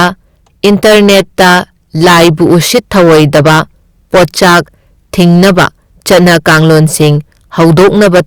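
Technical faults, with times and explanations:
Throughout, hard clipping: the speech is driven about 20 dB past what the chain can pass, so every loud stretch has its peaks sliced flat, roughly one sample in seven. Those square tops throw harmonics high up the spectrum, giving a harsh, buzzy fuzz on all the louder syllables rather than occasional crackle. Unlike soft saturation, the distortion switches on abruptly at the ceiling, with gritty high-frequency edge instead of a warm, rounded thickening.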